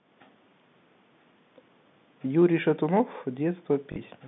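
At 3.92 to 3.96 s, packet loss with last packet repeated replays about 40 ms of audio, consistent with two 20 ms packets, giving a brief buzzy stutter over the telephone-band speech.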